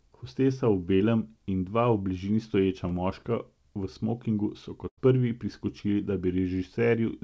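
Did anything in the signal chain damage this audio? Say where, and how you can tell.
Yes, and it's the network stage. There are two bits of short concealed packet loss: 0.96 to 1.02 s, just before "in dva", and 2.88 to 2.92 s, right after "bližini stoječa". Each is a brief smear where the receiver stretched the previous sound over about 40 ms and then 20 ms of missing audio.

The bigger hit is a burst of packet loss from 4.88 to 4.99 s, just after "smokingu so". About 100 ms never arrived. The concealment held and faded the last sound for roughly 94 ms, and the audio picks up further on with that chunk gone. It all sits on a call path with nothing above 8 kHz, which fits G.722 at 64 kbps.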